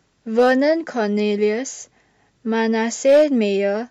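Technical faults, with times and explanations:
0.39–0.52 s and 3.07–3.23 s, hard clipping: a stage in the chain was driven past its limit, by about 2 dB and then about 4 dB, so speech peaks were sliced flat. Those squared tops add high harmonics, heard as brief crackle, rougher in the second, heavier burst.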